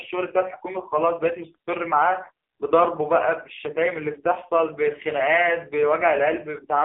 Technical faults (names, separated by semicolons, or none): AMR narrowband mobile codec